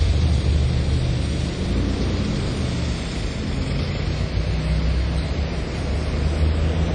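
Throughout the clip, the sound rings and smears, with a hiss that swells and fades alongside it. Nothing remains above 10.1 kHz. This is likely WMA compression at a low bitrate, about 32 kbps, whose long transform blocks spread quantisation noise and discard weak detail.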